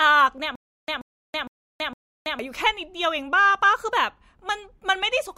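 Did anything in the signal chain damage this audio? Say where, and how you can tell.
Yes. From about 0.56 s to 2.39 s the speech breaks into a stutter with silent gaps: a short burst of roughly 133 ms plays, then about 327 ms of dead digital silence follows, and that cycle comes round four times at a steady 460 ms pace. The stage is playback or streaming, likely a stalled buffer that kept replaying its last fragment on each retry and then ran dry. Whatever should have played across that stretch is simply gone.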